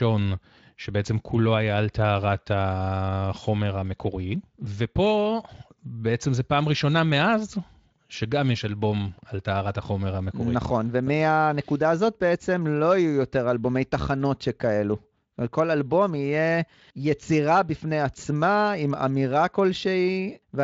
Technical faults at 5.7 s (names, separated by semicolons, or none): none